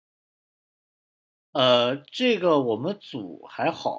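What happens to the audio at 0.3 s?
Nothing goes wrong at 0.3 s: the speech carries on intact there, with only the ordinary band-limiting of call microphone processing, which trims the lowest bass and leaves nothing above 8 kHz.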